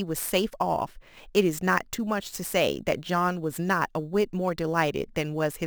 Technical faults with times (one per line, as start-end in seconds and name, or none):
0.00-5.66 imaging from sample-and-hold upsampling